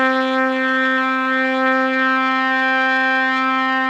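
From the start to the end of the clip, the audio has a doubled audio track. A second copy of the full sound follows about 0.7 seconds behind the first. It sits roughly 5 dB quieter. The copy is not smeared like a room echo. It has no decay and no added colour, so each event simply sounds again, cleanly, a beat later. The likely cause is a second capture through a slower path mixed back in.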